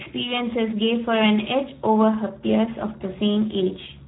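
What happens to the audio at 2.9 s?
At 2.9 s, as across the whole clip, Speex codec damage leaves speech hoarse and buzzy with nothing above 3.8 kHz, a starved-excitation roughness pointing to roughly 8 kbps, unlike clean band-limiting.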